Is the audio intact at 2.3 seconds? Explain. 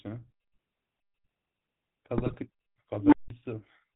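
No. From 2.18 to 2.36 s there's a burst of GSM bit errors. Corrupted bits are reaching the decoder, so the filter, pitch and gain values go wrong frame by frame, and the speech breaks into squawks, pops and gargling. The span fits about nine 20 ms frames being hit.

Underneath that, the GSM full-rate codec is running at 13 kbps across the whole clip. Its pulse-driven vocal-tract model gives the speech a plainly buzzy, gravelly edge, and nothing comes through above 4 kHz.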